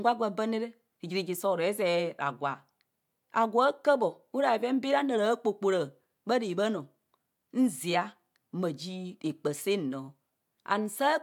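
Nothing stands out here to flag as a technical fault; the speech runs along without any dropout, glitch or other problem you could point to at a particular moment.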